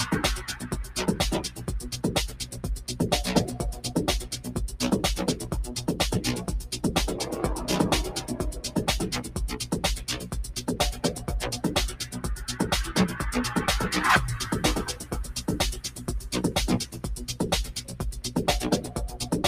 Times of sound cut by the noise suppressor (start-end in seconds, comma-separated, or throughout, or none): 0.48-2.88, 4.33-4.50, 8.19-11.27, 12.01-12.20, 14.90-16.08, 16.85-18.30